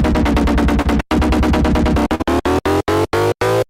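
At 0.81 s there is short concealed packet loss. About 40 ms of audio never arrived in time. The receiver filled roughly 34 ms by extending the last sound, then blended back. It is heard as a brief smear or wobble lasting until 0.87 s.

At 2.15 s a burst of packet loss follows. Consecutive packets went missing or came too late. The receiver stretched the preceding sound for about 46 ms, fading it as the gap lengthened. This gives a held buzz or fading hiss before the audio resumes at 2.21 s, with about 40 ms gone.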